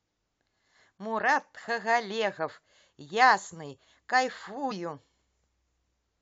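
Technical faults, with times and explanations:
4.70 s, damaged data in a compressed stream: a corrupted stretch of the encoded speech makes the decoder misread the frame there and lose sync while it hunts for the next valid header. The result is a brief glitch lasting roughly 20 ms.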